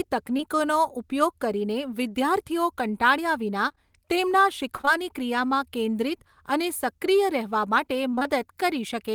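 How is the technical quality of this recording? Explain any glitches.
The recording has a few network dropouts, all of them packet-loss glitches.

Right at the start, from 0.37 to 0.41 s, there's a short concealed packet loss. About 20 ms of audio never made it to the decoder in time, and the receiver papered over roughly 11 ms of that by stretching out the last bit of sound before fading back into the real signal. You hear it as a tiny smear or wobble, and anything very short in that instant can just drop out.

The bigger problem is repeated packet loss, which gives that robotic sound in two stretches. From 3.69 to 4.89 s there are six separate gaps, none longer than 24 ms, and concealment covers about 8% of that span. The result is an intermittent choppy texture. From 8.11 to 8.27 s it's much denser: four gaps packed in, so about half of that short stretch is patched-in sound, and it comes across as chopped.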